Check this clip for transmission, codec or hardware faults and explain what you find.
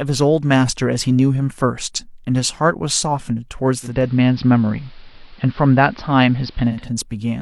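One fault is present, in this speech recording. Digital radio blending to analogue runs from 3.79 s to 6.91 s: the receiver lost its digital stream and cross-faded over about 0.29 s to the station's AM broadcast, then back. Level shifts by about 2 dB, and faint hiss sits roughly 35 dB down.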